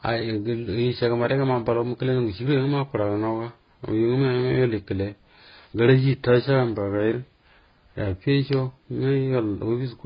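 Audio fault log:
Throughout: transcoding between lossy codecs, likely low-rate AAC re-encoded as Vorbis; the speech stops near 5.1 kHz, with both codecs' smearing and warbling layered together.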